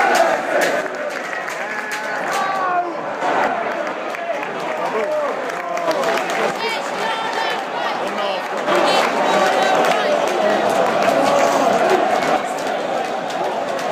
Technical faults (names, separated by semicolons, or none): one channel drops out